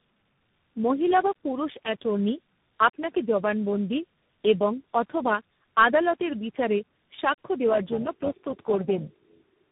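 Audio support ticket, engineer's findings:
Tandem speech coding across the whole clip: call decoded and re-encoded at each network border, passing through three speech codecs in a row (AMR-NB at its 5.9 kbit/s rate, G.729A, CVSD), with G.711 links between. Each coder works on the previous one's damage, so errors stack. Result: speech rough, muffled and warbly throughout, worse than any single codec, band-limited with nothing above 3.8 kHz. CVSD last stage adds granular noise grit.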